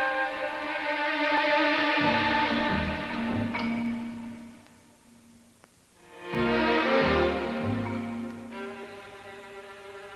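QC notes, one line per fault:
1.37, 3.86, 6.35 and 8.84 s: audio missing between chunks. Each event is a tiny skip where roughly 15 ms of sound vanishes and the two sides butt together with no gap. They repeat every 2.5 s, so the likely cause is a recorder or processor working in 2.5 s blocks and dropping a sliver at each handover. The join is abrupt, so each one reads as a brief jump in the sound, heard through the call codec's usual coding noise.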